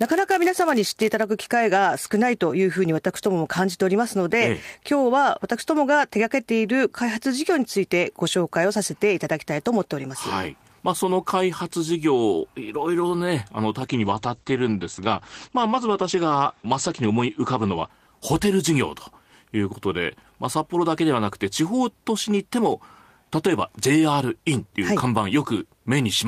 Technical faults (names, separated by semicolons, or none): block size mismatch (padded); call bitrate drop